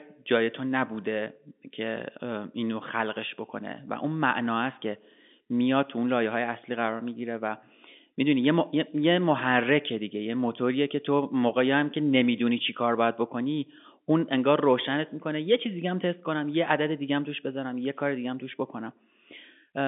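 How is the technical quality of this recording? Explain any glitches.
No glitches can be heard in this speech recording. It has been carried over G.711 telephone coding, which keeps the sound to a narrow band of roughly 200 Hz to 3.6 kHz with nothing above 3.7 kHz, and any coding noise is faint at most.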